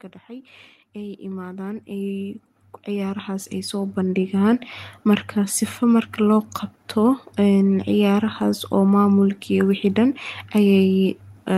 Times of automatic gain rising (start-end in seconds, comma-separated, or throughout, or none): 0.93-5.64